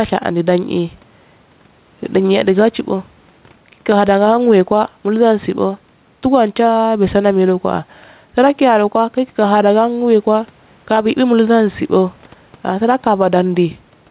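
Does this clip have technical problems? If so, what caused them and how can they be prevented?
Yes. Gain pumping runs throughout: the gain swings by around 5 dB, pulled down under each loud syllable, likely from gain set too high and a fast limiter clamping it. Setting the microphone gain lower and using slower, gentler compression would prevent it.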